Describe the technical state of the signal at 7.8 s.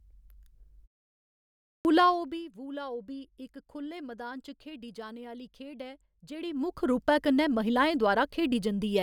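At 7.8 s the speech signal is intact, with no fault present at that moment.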